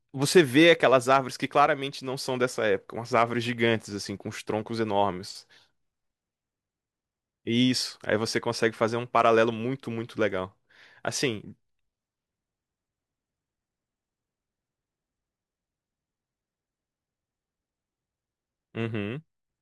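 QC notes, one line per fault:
3.16–3.22 s, hard clipping: for about 60 ms the speech peaks run roughly 1 dB past what the signal path can hold, so their tops are sliced flat. Those squared-off crests add high harmonics, heard as a brief crackle on that loud moment.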